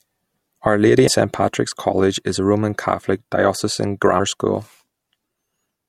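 At 1.07 s and again at 4.19 s, compressed frames are skipped. Roughly a tenth of a second of speech vanishes each time, which fits about four 24 ms frames being dropped. At each join the audio jumps ahead, seen as a sudden jump in the spectrogram's harmonics.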